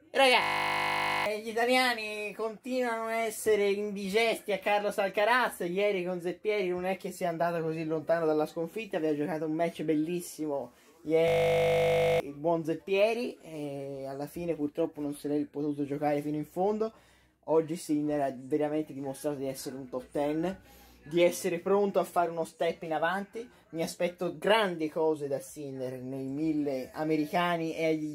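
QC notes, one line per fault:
0.42–1.26 s and 11.28–12.2 s, system hang loop: the same 20 ms slice of audio repeats 42 and then 46 times while playback is frozen, giving a steady 50 Hz buzz, and about a second of audio is lost each time. Unlike mains hum, it replaces the sound outright and starts and stops abruptly.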